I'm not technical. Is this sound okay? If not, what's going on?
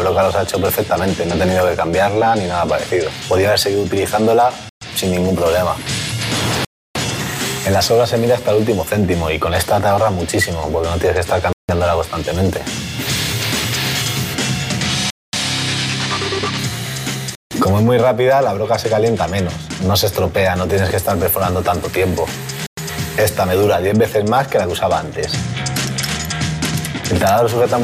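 No. The sound drops out briefly six times: at 4.69, 6.65, 11.53, 15.10, 17.35 and 22.66 seconds. Each gap lasts about a tenth to a third of a second. Then the sound resumes. This is most likely a Bluetooth stall, where wireless hiccups briefly starve the headphones of audio.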